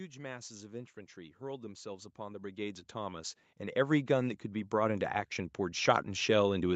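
From 0.05 to 6.36 s, automatic gain rising steadily lifts speech and background together by about 19 dB, visible as a waveform envelope widening continuously across the clip.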